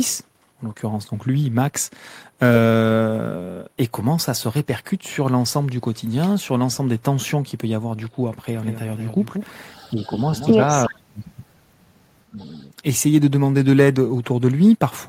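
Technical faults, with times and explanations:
8.56–10.54 s, doubled audio track: a slower second capture path likely mixes the speech in twice, with a dry copy roughly 200 ms behind at about 10 dB lower, starting and stopping abruptly.
9.77–10.14 s and 12.39–12.58 s, echo leak: the far end's echo canceller likely let loudspeaker pickup through, returning faint speech 377 ms late, about 30 and 35 dB down.
9.90–10.18 s, 10.88–11.24 s and 12.30–12.41 s, speech suppressed in double talk: with both sides talking, the echo canceller likely turned the talker down, causing dips of about 5, 40 and 15 dB.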